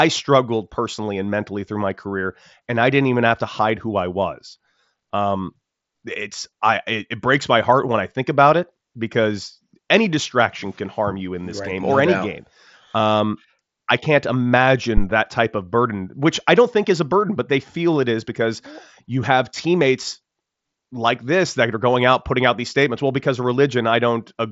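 A speech clip with a single deep thump at 14.97 to 15.07 s, just before "that type of burden", dying away in about 22 ms. It is a phantom power thump: a supply switched on a live input, its voltage step pushed through the coupling capacitors. The Bluetooth mSBC headset codec path leaves nothing above about 7.7 kHz.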